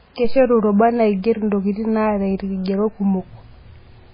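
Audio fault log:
Throughout: MP3 compression, heavy. The speech has nothing above 5 kHz, so s sounds lose their edge and the top end sounds dull. Quiet detail warbles and swirls as weak parts of the spectrum drop in and out from one frame to the next. Consonant onsets are smeared. This is likely an MP3 encoder starved of bits. It cut the treble at a fixed frequency and threw away low-level content. The damage fits a bitrate around 16 kbps.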